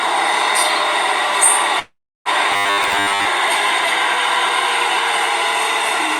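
At 1.79 s the audio hits a call audio freeze lasting until 2.29 s. The last sound is drawn out into a fading buzz, then about 340 ms of silence. This is likely delayed packets starving the jitter buffer. Playback resumes where it stopped, nothing lost, running about 461 ms later.

From 2.52 to 3.25 s comes robotic sound from repeated short buffers, a rigid metallic buzz at 100 Hz. That pitch fits a 10 ms slice being looped, likely because new audio arrived too seldom. Most of the stretch is repeats, with the real audio skipped.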